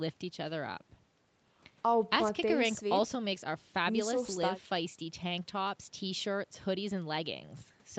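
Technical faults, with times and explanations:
The speech sits within a band that ends at about 8 kHz, which fits a call path running a wideband Opus setting near 32 kbps, with no technical faults heard.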